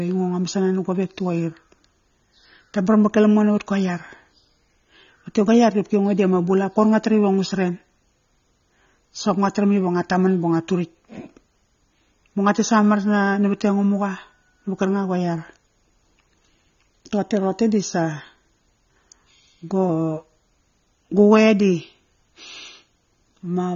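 From start to finish the speech sounds dull and plainly smeared, with nothing above about 6.9 kHz and a fizzy, warbly edge on sibilants. That's likely AAC compression, with AAC-LC at a low bitrate around 24 kbps trimming the top and thinning the spectrum.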